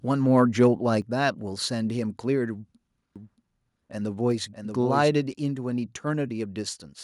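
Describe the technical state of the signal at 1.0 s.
A microphone volume stepped down at 1.02 s: the speech and the background beneath it fall together by about 5 dB in a single abrupt step. The likely cause is the call software lowering the device's input volume after judging the microphone too loud.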